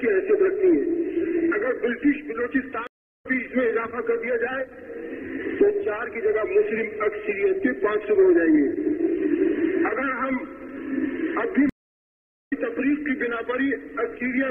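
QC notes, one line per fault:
2.87–3.26 s and 11.69–12.53 s, stream reconnect: the connection drops and the audio goes silent for about 0.38 s and 0.82 s. A fresh decoder then picks up mid-stream, so the sound resumes roughly 0.2 s and about a second further on, skipping material.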